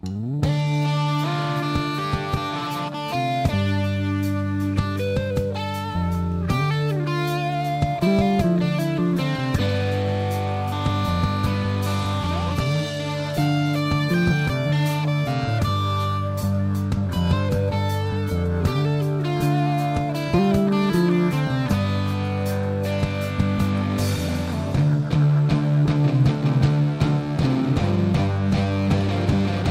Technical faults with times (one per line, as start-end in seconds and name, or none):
0.00-29.70 crude rate conversion